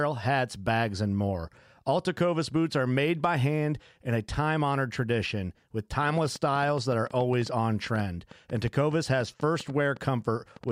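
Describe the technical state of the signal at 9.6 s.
At 9.6 s the signal sits inside a train of clicks that runs from 6.03 s, right after "time honored tradition with", to 10.70 s. Short pulses of much the same shape arrive at an uneven pace, about 6.65 per second, some thirty in all, peaking at roughly the level of the speech, likely from equipment interference or a faulty connection or power supply. They are heard as ticking over the speech and in pauses, appearing as thin vertical broadband lines on a spectrogram and sharp spikes in the waveform.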